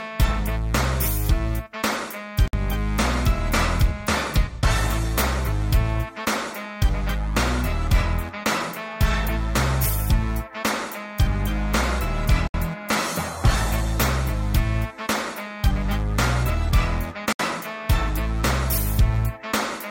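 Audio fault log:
2.48–2.53 s, 12.48–12.54 s, 17.33–17.39 s, gap at a join of encoded pieces: the sound drops into silence for 56, 65 and 68 ms with smeared edges, then resumes where it stopped. Separately encoded pieces were joined with their encoder start delay and end padding left in.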